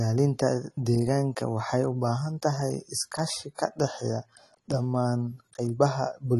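Speech, and the whole thing carries AAC compression damage: nothing above about 12.1 kHz, a dull, smeared top end, and a warbly, fizzy edge on sibilants. That's likely AAC-LC squeezed hard, which fits a low bitrate around 32 kbps.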